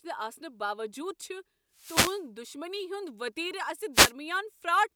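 Speech, with two wireless microphone noise hits at 1.74–2.23 s and 3.93–4.12 s. Each is a brief swish of static where the FM radio link fades and receiver noise swells over the voice, unlike a digital dropout, which goes silent instead of hissing.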